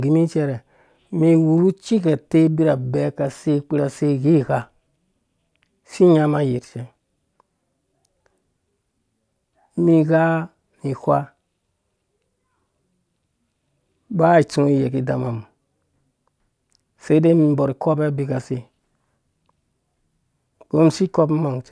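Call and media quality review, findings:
No audible faults found in the speech recording; nothing to log.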